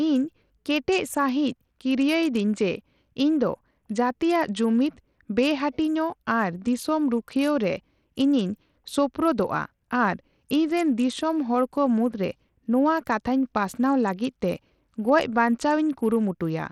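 From start to finish the speech carries a gritty, grainy roughness, and the upper treble thins out and flickers in and out instead of sitting at a steady cut-off. This is likely Bluetooth SBC compression at a starved setting, which fits a rate around 80 kbps. Too few bits reach the weaker top sub-bands, so they drop away intermittently. Unlike a plain low-pass, the loss comes and goes, and unlike MP3 swirl it brings coarse grit and aliasing.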